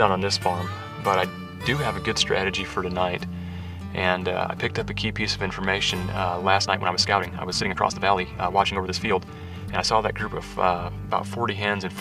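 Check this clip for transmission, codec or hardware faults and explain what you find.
Two faults are audible.

From 4.66 to 5.66 s the top end turns dull, a loss of air rather than obvious hollowness. This is channel delay (comb filtering): one channel lags by roughly a single sample, so summing to mono cancels content near 20 kHz.

From 6.56 to 9.88 s the pace jumps to about 1.46 times normal while pitch holds steady, sounding hurried. The cause is likely a time-stretched section, where software squeezed the audio by discarding short slices to keep pitch unchanged.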